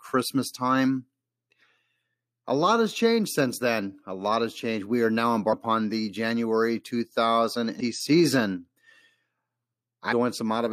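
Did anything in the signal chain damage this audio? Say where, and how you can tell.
Yes, at the codec stage: damaged data in the compressed stream. Short glitches occur at 5.48–5.54 s just after "are now", 7.76–7.81 s and 10.08–10.13 s. Corrupt bytes make the decoder misread frames and resync.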